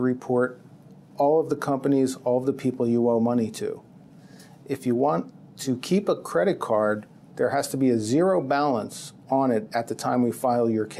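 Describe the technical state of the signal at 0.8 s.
At 0.8 s the signal is intact, with no audible fault at that moment.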